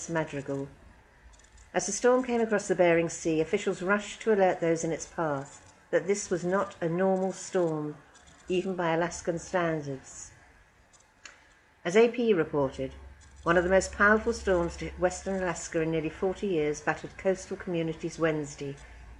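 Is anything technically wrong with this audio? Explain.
No, nothing stood out as technically wrong on listening.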